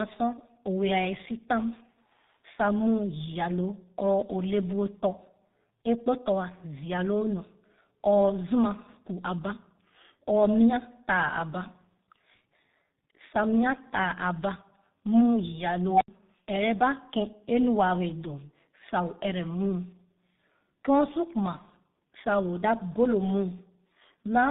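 Throughout, tandem speech coding: two speech codecs in a row, a CVSD link then G.723.1, re-encode each other's damage, giving rougher, more warbly, muffled speech than one codec, capped near 3.8 kHz. From 15.9 to 16.08 s, an unstable filter: a tone around 700 Hz swells over about 107 ms, overflows, then drops to roughly 75 ms of silence, unlike feedback howl, which builds slower and persists.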